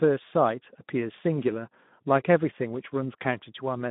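From start to finish this speech has Speex codec damage: hoarse and noisy, as the low-bit excitation can't track the voice cleanly, which fits a bitrate around 11 kbps. It's narrowband too, with nothing below 150 Hz or above 3.6 kHz.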